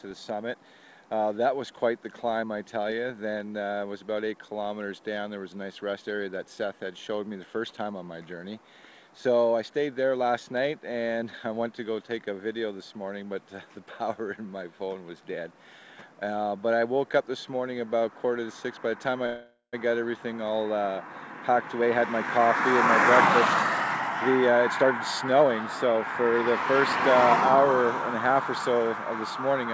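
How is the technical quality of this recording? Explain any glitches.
The recording has one call audio freeze and three jitter buffer speed-ups. Content above 8 kHz is missing throughout, which fits the G.722 call codec at 64 kbps.

From 19.26 to 19.75 s there is a call audio freeze. The last sound continues as a fading buzz for almost half a second and ends in about 90 ms of silence. The likely cause is delayed packets draining the jitter buffer. When the audio resumes, nothing is lost, but it now runs about 0.47 s later. A spectrogram would show flat, smeared horizontal bands and then a blank strip.

Jitter buffer speed-ups occur at 21.48 to 21.90 s (118%), 24.52 to 24.89 s (115%) and 25.33 to 26.33 s (118%). The receiver cut repeated pitch-period slices to shrink excess buffered delay, which removed several tens of milliseconds, and about a fifth of a second in the last one. The sound rushes forward with its pitch unchanged. 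On a waveform, these stretches look compressed in time.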